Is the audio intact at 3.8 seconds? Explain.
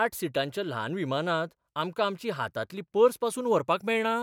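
Yes, at 3.8 seconds the audio is intact, with no dropout, click, distortion or other fault to be heard at that moment.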